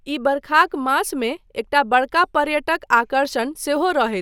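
No technical faults occur at any point in the speech, so there is nothing to describe in time order.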